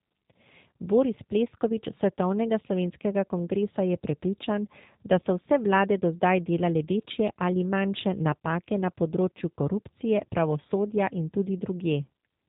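From start to finish the speech carries G.729 codec damage: it is rebuilt from a vocal tract filter, pitch predictor and sparse pulses, consistent with an 8 kbit/s G.729A stream. Nothing above 3.8 kHz remains, and the voice sounds plainly rough and synthetic.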